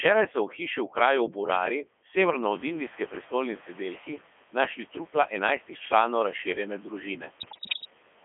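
From the start, the whole clip has gone through the Codec 2 vocoder at 3.2 kbit/s, squeezed into a 250 Hz to 3.4 kHz line band. Codec 2 doesn't keep the waveform. It sends pitch, voicing, energy and a rough spectral envelope, then rebuilds the speech from sine waves, so the damage here is heavy and the speech comes out buzzy and robotic. The room noise that comes up around 2.5 s, about 17 dB louder and still about 20 dB under the speech, gets smeared along with it.

From 7.40 to 7.90 s, bit errors on digital voice radio hit the stream, with roughly one bit in ten flipped. At such a low rate each bit sets pitch, level, voicing or spectral shape for a whole frame, so the corruption makes the synthetic speech leap in pitch and loudness and swing in tone colour. It dissolves into warbles and bleepy robotic gibberish for that half second.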